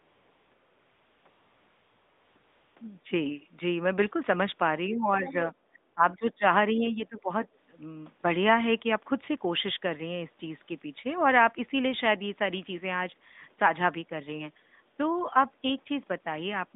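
Over the opening stretch the background is replaced by a smooth, steady hiss that switches in and out, from 0.00 to 0.52 s, 0.54 to 1.26 s, 1.30 to 2.36 s and 2.38 to 2.76 s. This is AMR comfort noise. The phone treated these moments as silence and stopped sending speech frames, so the receiver synthesised a stand-in noise from a rough sketch of the level and spectrum.

From 4.89 to 5.34 s the voice sags by roughly 15 dB. It drops deeper, by around 25 dB, from 5.73 to 6.44 s, and dips again by roughly 15 dB from 6.74 to 7.31 s. This is speech suppressed in double talk, likely because the far end was talking at the same time. The echo canceller could not tell the local voice from the loudspeaker echo and turned everything down. A brief patch of comfort noise also appears inside the second dip, from 5.92 to 5.96 s.

Between 5.25 and 5.33 s a faint scrap of the other side's voice leaks through, well below the talker. 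The echo canceller likely missed part of the loudspeaker signal reaching the microphone.

All of this sits on a narrow line band of about 200 Hz to 3.7 kHz with only light codec colouring, which fits AMR-NB at 12.2 kbps.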